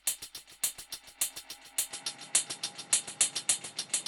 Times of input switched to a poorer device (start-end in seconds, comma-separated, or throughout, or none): 1.91-4.07